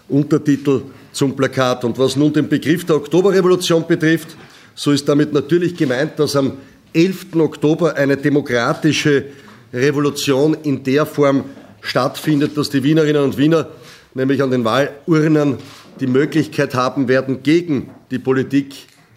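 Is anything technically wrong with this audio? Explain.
No, nothing technically wrong can be heard here.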